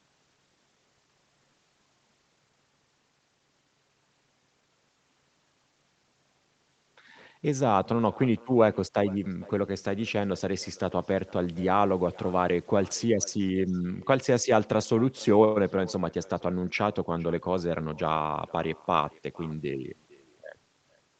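From the first second to the last, the speech carries an echo with no canceller: every phrase comes back roughly half a second later as a faint, thin copy, about 24 dB below the original. The far end is playing the call through a loudspeaker, its microphone catches it, and nothing strips it out before it's sent back. It's quiet but constant, like a ghost trailing the talker. The band-limited sound, stopping around 8 kHz, is just the call path.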